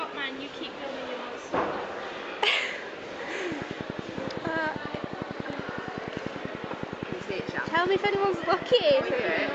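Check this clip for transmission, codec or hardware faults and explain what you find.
There is one fault, a train of clicks. From 3.52 s to 9.50 s a steady ticking sits on top of the audio, about 10.6 clicks per second at even spacing, around seventy in all. Each click is nearly the same sharp pop, peaking roughly 15 dB above the sound itself, and the ticking carries on through quiet gaps. Near-identical repeated pulses at a regular rate point to an outside source, likely electrical interference from nearby equipment or a faulty connection or power supply.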